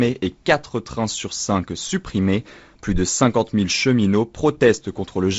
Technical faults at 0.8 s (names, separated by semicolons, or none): none